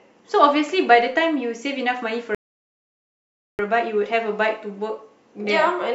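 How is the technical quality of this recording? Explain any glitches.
The speech drops into dead silence from 2.35 s to 3.59 s, then picks up exactly where it left off, with nothing missing. This is a rebuffering stall: playback ran dry of downloaded audio and paused for more data, adding about 1.24 s.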